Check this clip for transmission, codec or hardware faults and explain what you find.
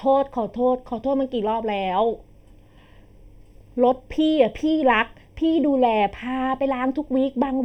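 One fault runs through the whole speech clip: channel delay (comb filtering). One channel lags by roughly 0.4 ms, so mono summing cancels evenly spaced frequencies from around 1.5 kHz upward, sounding hollow. Unlike a low-pass filter, the notches repeat rather than simply cutting the top end.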